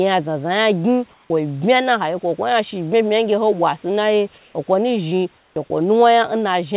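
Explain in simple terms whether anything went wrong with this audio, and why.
Three short problems come from the call's voice detector, which decides when to stop sending sound. All of it passes through a phone-style call path that carries nothing above 4 kHz.

Comfort noise in place of the background appears three times: 1.14 to 1.3 s, 4.38 to 4.54 s just before "akwo nu zhi", and 5.38 to 5.56 s just after it. In each gap the real room background gives way to a smooth, even hiss, most likely because the sender went quiet and the receiver made up filler noise. The first patch is a bit quieter than the room, the second matches it, and the third is clearly quieter.

An onset clipped by the voice detector follows at 5.52 to 5.56 s, right after "akwo nu zhi". The first 40 ms of the next sound are missing, so it starts abruptly instead of rising in gently. The detector likely reacted late, and the receiver played filler noise where that beginning should have been.

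Sound dropped by the voice detector occurs at 5.68 to 5.7 s. The detector likely treated real sound as background for a moment and stopped sending. About 10 ms of it is lost behind a 20 ms patch of filler noise.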